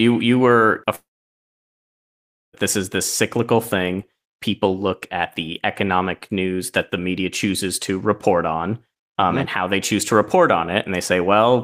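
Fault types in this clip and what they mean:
long network dropout: after "you were", a short fading fill then 1.5 s of silence, likely lost packets; unlike a brief glitch, 1.6 s never returns.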